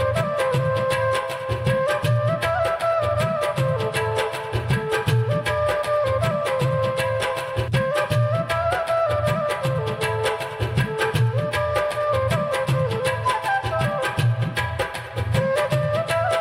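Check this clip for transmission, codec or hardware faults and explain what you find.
Nothing here points to a transmission, codec or hardware problem, so there's nothing to flag.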